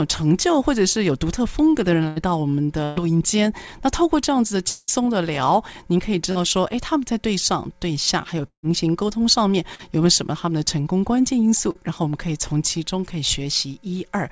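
It's a speech clip over a call path, band-limited with nothing above 8 kHz, which fits G.722. There are two bursts of packet loss, at 2.08 to 2.19 s and 2.84 to 2.99 s. The receiver stretches the last sound into a fading buzz or hiss for roughly 80 and 120 ms, then the speech jumps ahead with that stretch gone. There are also two longer gaps, most likely long network dropouts. At 4.68 to 4.91 s, about 200 ms is concealed as a fading tail with no true silence. At 8.47 to 8.66 s, the fill dies into about 90 ms of dead air before the audio returns, missing what fell in between. Finally, there are three short concealed packet losses, at 6.32 to 6.38 s, 9.75 to 9.82 s and 11.71 to 11.78 s. Each is about 40 ms patched by continuing the previous sound, heard as a quick smear or wobble that can swallow a consonant.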